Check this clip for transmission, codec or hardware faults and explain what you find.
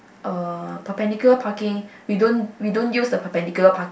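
Listening through the speech in this recording, nothing stood out as a problem.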